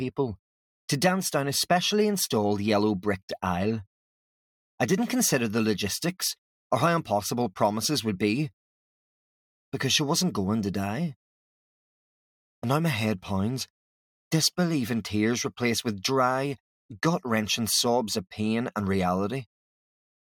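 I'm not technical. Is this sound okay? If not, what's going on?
Yes, nothing technical is wrong with this sound; there's no fault to report.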